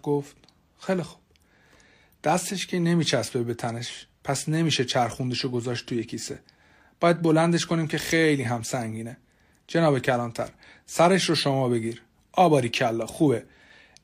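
Nothing is technically wrong with this speech recording: no faults can be heard at any point, so there are no times or causes to give.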